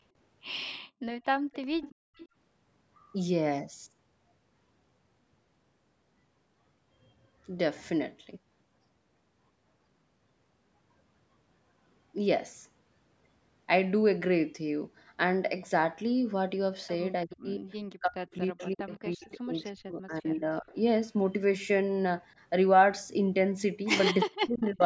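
At 0.85 s the room background is gated by the echo canceller. The canceller clamps the microphone while the far end plays, so the ambience drops by about 32 dB for roughly 150 ms until 1.02 s, then returns.

From 1.24 to 2.27 s there is an echo leak: a faint copy of the speech trails it by 338 ms, about 15 dB down. The likely cause is an echo canceller on a loudspeaker endpoint failing to remove everything its microphone picked up, so the residue was sent back. Inside that span, from 1.95 to 2.16 s, the background is gated again, dipping about 30 dB for roughly 200 ms.

Speech is suppressed in double talk from 17.25 to 17.64 s, from 18.01 to 20.75 s and from 24.25 to 24.82 s. The talker's level collapses by around 40 dB, about 1.5 s in total in the middle span. This is likely the canceller mistaking overlapping talk for echo and attenuating everything. During the middle span, from 18.31 to 19.28 s, the 338 ms echo leaks through again at about 20 dB below the speech. 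Throughout, the call microphone processing band-limits the audio, with nothing above 8 kHz.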